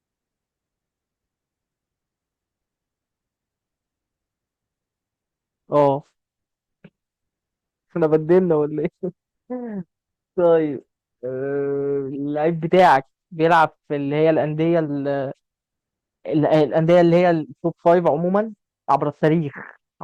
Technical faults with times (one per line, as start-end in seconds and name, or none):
5.76-5.88 hard clipping
8.03-8.38 hard clipping
10.45 hard clipping
12.73-12.96 hard clipping
13.44-13.64 hard clipping
16.54-17.19 hard clipping
17.86-18.36 hard clipping
18.90-19.28 hard clipping